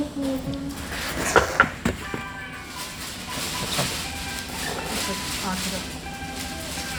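No technical faults are audible.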